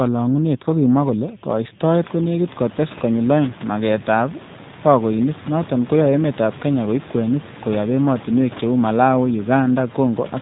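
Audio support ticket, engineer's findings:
G.729 codec damage throughout speech, plainly audible. Band capped at 4 kHz, rough, synthetic texture. Room noise rising near 2.0 s by about 24 dB warbles under it. Cause: CELP rebuild from vocal-tract filter, pitch predictor and sparse pulses per 10 ms frame, consistent with 8 kbit/s G.729A.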